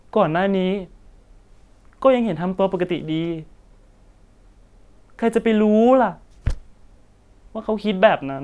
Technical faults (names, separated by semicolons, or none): none